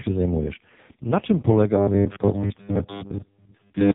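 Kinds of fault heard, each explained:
AMR narrowband mobile codec: nothing gets through above 3.8 kHz, and the speech is heavily buzzy and synthetic, which points to AMR-NB's lowest mode, around 4.75 kbps.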